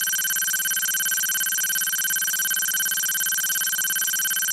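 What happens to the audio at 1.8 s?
Nothing goes wrong at 1.8 s; the sound plays through that moment intact.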